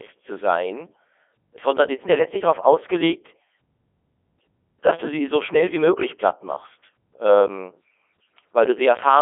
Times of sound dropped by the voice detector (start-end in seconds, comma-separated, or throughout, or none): none